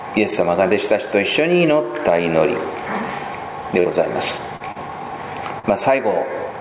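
Right from the start there's gain pumping running through the whole clip, with the level swinging by something like 15 dB. The likely cause is input gain set way too hot, with a fast limiter or compressor clamping down on every peak. The result is that loud and soft parts sit squashed together.

Later there's a cluster of short concealed packet losses, at 3.80 to 3.88 s, 4.57 to 4.63 s, 4.72 to 4.78 s and 5.59 to 5.66 s. Each one is a hole of about 40 ms that the receiver papered over by stretching out whatever sound came just before, then blending back into the real audio. You hear each as a quick smear or wobble. All of this sits inside a band with nothing above 4 kHz, which fits a narrowband G.711 call path.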